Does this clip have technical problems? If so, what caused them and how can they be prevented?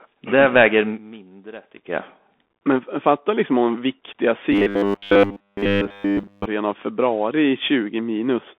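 Yes. From 0.64 to 2.2 s, a loudspeaker feedback squeal at 4.5 kHz swells within about 0.3 s to roughly 5 dB above the speech. The loop gain exceeds one at that frequency, and a spectrogram shows a bright horizontal line. Lowering monitor gain, repositioning the microphone or notching 4.5 kHz prevents it.

From 4.52 to 6.46 s, between "fatta liksom om viktiga" and "av februari i", the speech becomes a rigid 100 Hz robotic buzz throughout. This is likely from repeating short buffers, which fits a 10 ms buffer. The spectrogram shows a comb of 100 Hz harmonics, and the waveform shows identical repeating cycles. Larger jitter buffers or a steadier connection prevent it.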